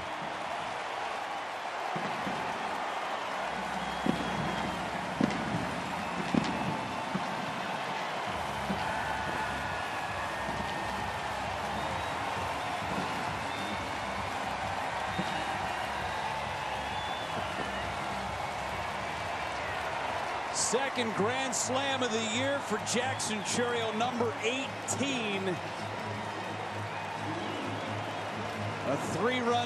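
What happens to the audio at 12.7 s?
Nothing goes wrong at 12.7 s; the audio runs through that moment intact, with no dropout, click, glitch or other fault.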